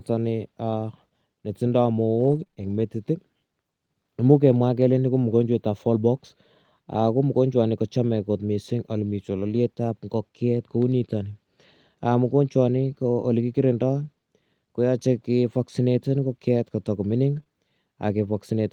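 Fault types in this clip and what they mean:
Repeated packet loss (robotic sound): Four brief holes between 2.19 and 2.80 s, each up to 20 ms, bridged by extending prior sound, giving choppy, robotic texture rather than one isolated smear.
Lost packet rebuilt from error correction: At 9.46–9.56 s (three packets, 60 ms) and 17.36 s (one packet), low-bitrate copies fill in. The sound turns rougher and noisier, but there are no gaps.
Short concealed packet loss: Two adjacent 20 ms losses at 17.40–17.44 and 17.44–17.48 s were patched by continuing earlier sound, heard as a brief smear or wobble rather than recurring choppiness.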